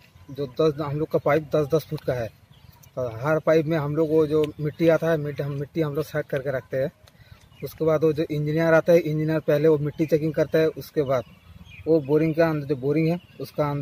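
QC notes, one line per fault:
No fault found, so there is nothing to log in these QC notes.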